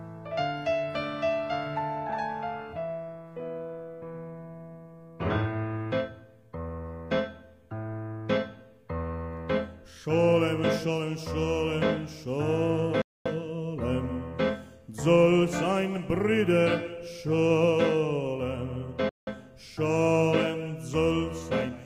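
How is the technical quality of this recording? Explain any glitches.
The recording has two interruptions. There are playback stalls at 13.02 s and 19.09 s, lasting about 0.24 s and 0.18 s. The sound cuts out mid-flow, then carries on. The player likely ran short of data or was briefly blocked, leaving the output silent until it recovered.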